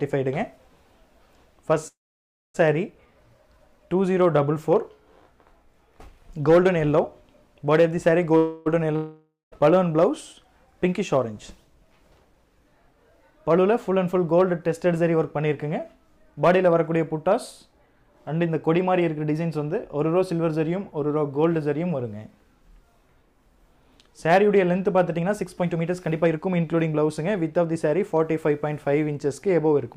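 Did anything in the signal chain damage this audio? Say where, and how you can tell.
Yes, and it's all on the network and jitter-buffer side of a call. There are three kinds of damage.

First, a call audio freeze at 1.87–2.56 s and again at 8.37–8.68 s. The last sound hangs as a fading buzz. The first one sits near-silent for about 0.58 s, and the second fills about 0.29 s. Then the audio picks up exactly where it stopped, with nothing skipped. That's likely packets held up until the buffer ran dry.

Second, a long network dropout at 8.96–9.54 s. You get the same fading fill, ending in about 0.14 s of silence. When the audio returns, roughly 0.6 s of material is simply gone, so it jumps ahead. The likely cause is packets that never arrived at all.

Third, jitter buffer speed-up at 10.68–11.25 s (106%), 13.24–15.15 s (107%), 17.28–20.64 s (107%) and 25.09–28.23 s (116%). The sound runs hurried at unchanged pitch. 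The receiver is trimming tiny pitch-period slices to shed the backlog. That takes out roughly 40 ms, 150 ms, 200 ms and half a second.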